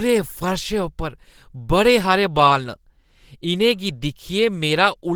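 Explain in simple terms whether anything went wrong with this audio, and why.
The speech was squeezed too hard, likely by Opus compression, for the whole clip, so the speech sounds muffled and hoarse from start to finish.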